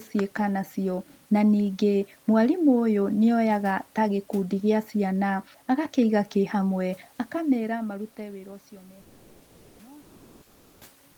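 Comfort noise in place of the background at 9.01–9.79 s and 10.01–10.81 s: the room noise, about 35–38 dB below the loudest speech, turns into a steady, featureless hiss, with about a 2 dB level change the second time. This is likely Opus discontinuous transmission, with the receiver synthesising noise.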